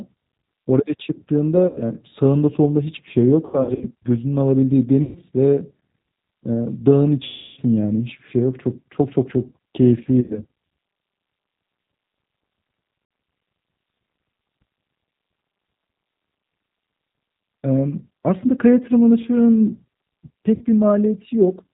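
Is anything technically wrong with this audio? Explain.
Yes. Throughout, the speech sounds band-limited, slightly rough and synthetic, with nothing above 4 kHz. This is G.729 codec damage: an 8 kbit/s coder rebuilding speech from a vocal tract filter, a pitch predictor and sparse pulses.

VoIP packet loss concealed by the speech codec causes brief buzzy, smeared stretches that fade and then recover weakly. It occurs at 1.67–1.82 s, 3.45–3.85 s (about 210 ms lost, scattered), 5.03–5.19 s, 7.24–7.61 s (the longest, about 330 ms), 10.21–10.41 s, 13.05–13.11 s and 20.55–20.65 s. Each time, the decoder filled the missing audio by extending its last pitch and filter with decaying gain.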